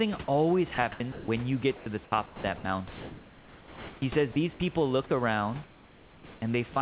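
From 0.24 to 0.28 s a brief slice of speech gives way to steady hiss: sound dropped by the voice detector, which likely misjudged it as background and stopped sending while the receiver filled in comfort noise. Between 0.74 and 1.28 s, and again from 1.76 to 4.02 s, the speech turns choppy, its quiet edges repeatedly swapped for flat noise, about 280 ms of it in the first stretch and 1.58 s in the second. This is sound chopped by the voice detector, which likely toggled sending on and off. The same single dropout recurs at 4.32 to 4.36 s. From 5.64 to 6.42 s the real background is replaced by a smooth, featureless hiss about 3 dB quieter: comfort noise in place of the background, likely synthesised during a transmission pause. A last dropout, likely by the voice detector, cuts in at 6.74 to 6.76 s. Throughout, the band stops at 4 kHz, as the narrowband call codec does.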